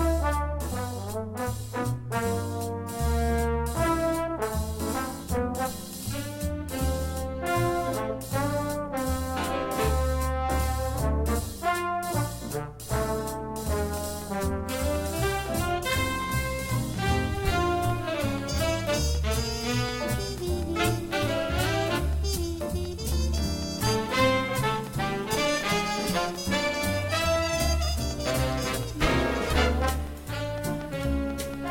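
From 13.73 s to 31.55 s a train of clicks runs under the audio, a regular ticking at about 4 clicks per second, some seventy in all. Each click has much the same sharp shape and peaks a few decibels above the surrounding signal, so it stays audible over the sound and in pauses too. The steady pulse rate points to an external source, likely electrical interference from nearby equipment or a faulty connection or power supply.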